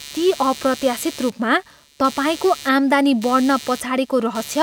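Computer activity noise runs through the whole recording: a buzzy, chirping texture pulsing at around 150 times a second, roughly 20 dB below the speech. Processor and peripheral load shifts disturb the audio circuit's shared ground, so the interference follows the machine's workload rather than the talker.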